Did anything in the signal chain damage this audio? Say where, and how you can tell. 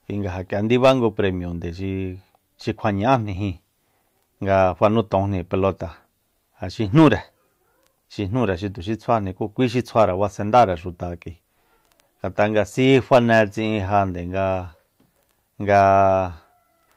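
No, nothing in the signal chain damaged this recording.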